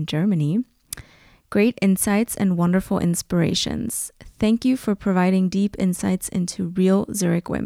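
No technical faults can be heard anywhere in the recording. The speech runs from beginning to end with nothing to flag.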